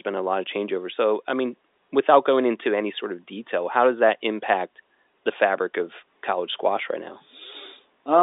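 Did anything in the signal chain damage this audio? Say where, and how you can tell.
No, nothing in the chain has damaged this speech; it is an ordinary G.711 telephone path, with the sound held to the line band of roughly 300 Hz to 3.7 kHz.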